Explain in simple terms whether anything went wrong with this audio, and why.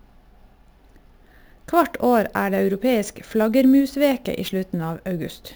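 Yes, the whole speech clip has imaging from sample-and-hold upsampling: a metallic fizz between 8 and 16 kHz, like low-rate audio stretched up without smoothing.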